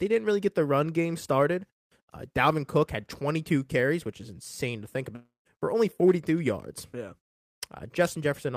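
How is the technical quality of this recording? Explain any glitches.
The recording has one clear glitch. From 5.15 to 5.47 s, right after "is insane to think", the sound smears into a fading buzz, then drops to silence for about 160 ms before resuming at "for only" with roughly 0.3 s missing. This is likely a long network dropout: the receiver stretched the last sound to cover the gap, then gave up.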